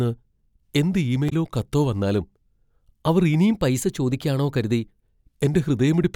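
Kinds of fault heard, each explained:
Damaged data in a compressed stream: at 1.26 to 1.33 s, just before "കത്തോ വന്നാലും", corrupted frames make the decoder lose sync.
Drift correction step: from 3.51 to 4.83 s, playback runs 6.3% fast and about a semitone sharp, then snaps back, likely from clock-matching software refilling or draining its buffer.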